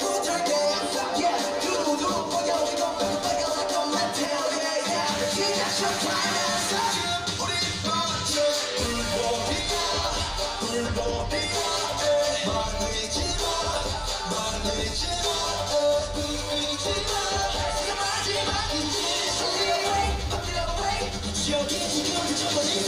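From start to finish the clip carries channel delay (comb filtering): one channel arrives roughly 10 ms behind the other, and when the two are summed the shared content cancels at evenly spaced frequencies, with the first notch somewhere around 50 Hz and further dips repeating about every 100 Hz upward. The result is a hollow, slightly phasey tone. Unlike flanging, the notches never sweep; unlike room reverb, there is no audible tail.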